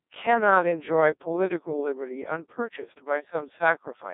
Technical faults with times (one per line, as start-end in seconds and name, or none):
0.00-4.14 Codec 2 vocoder